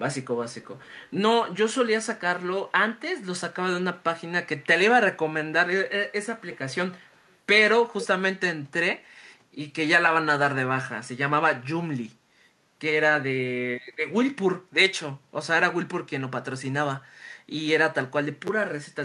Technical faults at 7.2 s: echo leak

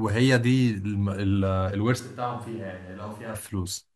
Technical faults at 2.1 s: switch to a distant microphone

